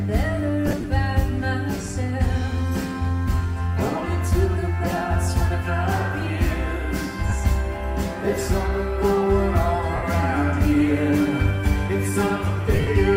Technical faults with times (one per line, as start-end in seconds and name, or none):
0.68-0.84 lost LE Audio frames
7.30-7.32 lost LE Audio frames
9.96-10.03 lost LE Audio frames
12.73-12.87 lost LE Audio frames